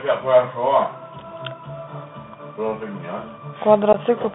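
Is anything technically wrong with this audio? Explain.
Yes. Throughout the clip, the speech sounds thin and boxed-in, with a gritty, granular hiss beneath it and scratchy, roughened s sounds. Nothing carries above about 3.6 kHz or below about 150 Hz. This is a Bluetooth CVSD headset codec, which fits a 64 kbps link. CVSD codes each sample as a single up-or-down bit with an adapting step size. Fast, bright sounds outrun that step, which causes the distortion, and the coarse stepping leaves the hiss. The damage is plainly audible.

From 3.93 to 3.96 s there is a brief, abrupt hole in the speech, with hard edges and a quieter moment as the sound resumes. This is unconcealed Bluetooth headset packet loss. About 15 ms of audio, a couple of short voice packets between headset and phone, never arrived. Nothing filled the gap, so the sound cuts off sharply, and the CVSD decoder briefly comes back at reduced level as its step size recovers.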